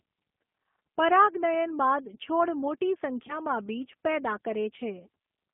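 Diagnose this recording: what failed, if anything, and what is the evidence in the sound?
The codec stage is at fault throughout. The sound is confined to roughly 200 Hz to 3.5 kHz, with nothing above. The speech has a rough, synthetic texture that is plainly audible. This points to the G.729 codec at 8 kbit/s. It does not send the waveform. It sends a vocal tract filter, a pitch predictor and a few pulses per frame, and the decoder rebuilds speech from those. That coarse rebuild causes the roughness.

The network stage failed briefly. From 3.27 to 3.37 s there is VoIP packet loss concealed by the speech codec. A stretch of about 20 ms is missing, which fits one lost packet. The decoder filled the gap by repeating its last pitch and filter at falling gain, so the sound is stretched and fades. Each frame builds on the one before, so the damage lingers after the packets return before the speech recovers.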